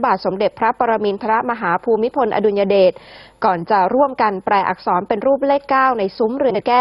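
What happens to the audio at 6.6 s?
Between 6.50 s and 6.60 s the audio has frames out of order. Two adjacent runs of coded audio, each about 46 ms long, were decoded in swapped sequence, so this short stretch plays with its two halves exchanged. The run length fits two frames per block. It is heard as a brief garbled flutter. No time is lost.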